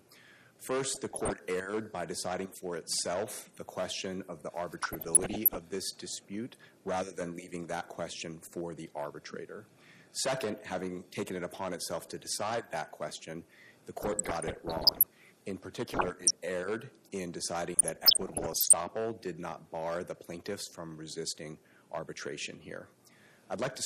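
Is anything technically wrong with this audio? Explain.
Yes, two faults are audible.

Throughout, the sound is dull and carries a gurgling, granular edge as upper bands flicker in and out. This is likely MP2 compression at a low bitrate, around 80 kbps, where sub-bands lose their bits and the rest are coarsely quantised.

DAB burbling comes in five bursts: 0.87–1.30 s, 4.79–5.64 s, 14.02–15.03 s, 15.92–16.31 s and 17.74–18.74 s. Each adds short blips of noise. Reception errors of roughly 0.5 to 1 percent slip past error correction and make single sub-bands jump in level for up to a frame.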